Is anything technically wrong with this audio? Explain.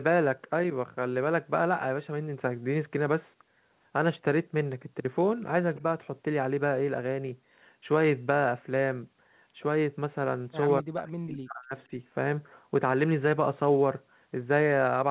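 Yes. Two kinds of call-processing fault can be heard in this speech.

Echo leak appears at 5.76 to 5.81 s and again at 11.78 to 11.83 s. A faint copy of the far-end speech returns about 221 ms late, roughly 25 dB and then 35 dB below the talker. The likely cause is an echo canceller leaving loudspeaker pickup in the outgoing signal.

Speech suppressed in double talk occurs from 10.81 to 11.73 s. The talker's level dips by as much as about 40 dB, with the disturbance lasting around a second. This is likely an echo canceller that could not separate near-end speech from loudspeaker echo while both sides spoke and turned both down.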